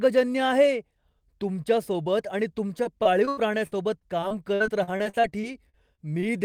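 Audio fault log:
2.83–6.24 s, repeated packet loss (robotic sound): after "तुमच्यासोबत आणि तुमच्या", about twenty holes of up to 80 ms are each filled by stretching the preceding sound, leaving choppy, robotic speech with pieces missing.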